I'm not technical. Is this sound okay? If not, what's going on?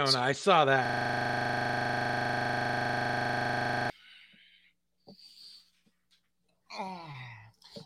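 No. Right after "I saw", from 0.86 to 3.9 s, you get a system hang loop: the computer froze and the audio hardware kept replaying the same 40 ms sliver, about 25 times a second, so it comes out as a rattling, buzzy stutter.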